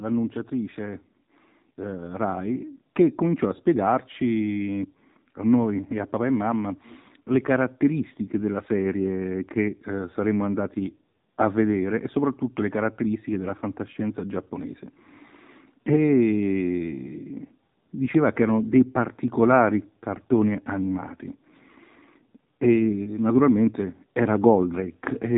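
Buzzy, synthetic speech with a boxed-in, phone-like tone throughout and nothing above 3.8 kHz comes from the AMR narrowband mobile codec, whose plainly audible damage fits a low bitrate around 7.4 kbps. From 0.49 s to 18.05 s, ending just before "che erano dei particolari", voice and background swell together by about 10 dB. That is automatic gain rising, as the gain control slowly lifts an input it judged too quiet.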